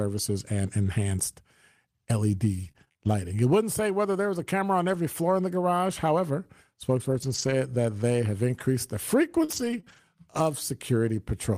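From 2.63 to 3.07 s, repeated packet loss (robotic sound) sets in. Five packets go missing in quick succession, the longest hole 29 ms, and the receiver fills each by stretching the previous sound. About 27% of that stretch is concealed, so the speech turns choppy and mechanical.

At 4.93 s a single lost packet is rebuilt from error correction. The following packet carried a low-bitrate spare copy, which the decoder played in place of the missing 20 ms. Nothing drops out, but that instant sounds briefly rougher and grainier.

Between 7.10 and 9.98 s, scattered short gaps appear: around three packets are lost, spread apart, the longest near 40 ms. Each is patched by extending the preceding audio, concealing only a small fraction of the span. The speech stays clear apart from momentary ticks and smears.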